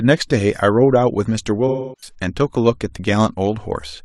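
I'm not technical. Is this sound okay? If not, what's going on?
No. Between 1.67 and 2.14 s the speech has an AAC frame loss with concealment. Roughly 0.3 s of audio went missing, and the decoder filled the gap by reusing the last good sound. That patch comes across as smeared rather than clean speech.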